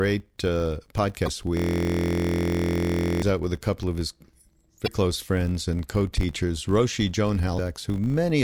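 Across the whole speech clip runs a buzz at 50 Hz that rises and falls with the speech level: a filter restarted on every block. The filter loses its state between blocks and starts each one from silence, so every block opens with a small transient.

From 1.24 to 1.28 s there is a 40 ms disturbance from damaged data in the compressed stream. Corrupted frames there were misread or rejected, and the decoder lost sync while it searched for the next valid frame header.

From 1.57 to 3.22 s, just before "out with a couple", a system hang loop repeats one 23.22 ms slice of audio 71 times. That gives a steady buzz at 43.1 Hz, which fits a 1024-sample ring buffer the hardware kept cycling through while the system was frozen.

The same compressed-stream damage returns for 40 ms at 4.84 to 4.88 s, just before "close friends and co", and again at 7.55 to 7.59 s.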